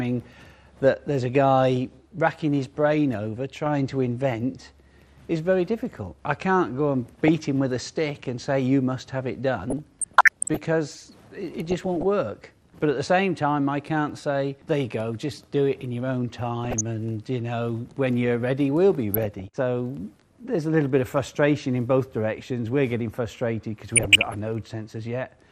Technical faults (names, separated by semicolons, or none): MP2 compression; DAB burbling